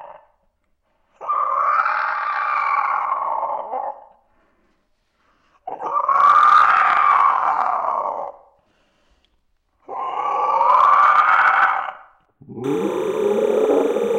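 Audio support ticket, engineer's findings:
Timecode bleed, 12.64 s to clip end (14.18 s). Chirping warble behind the sound, roughly 20 dB down, alternating near 1 kHz and 2 kHz. Probable component: adjacent LTC track or cable at 29.97 fps, square-wave code leaking into the audio path.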